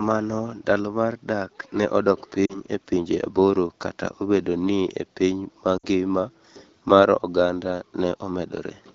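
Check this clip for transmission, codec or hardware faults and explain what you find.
Two short dropouts in the speech, both lost AMR speech frames, heard against clear wideband AMR-WB (HD Voice) coding. From 2.46 to 2.60 s, right after "mar dak ne odok" and before "e pinje aboro", radio errors corrupted about 40 ms of frames, roughly two 20 ms frames. The decoder repeats its last good settings with falling gain, so the sound thins and returns weak. From 5.77 to 5.86 s, after "ni e piny ma", about 60 ms went, roughly three frames, and the concealment fades toward silence quickly, as wideband does.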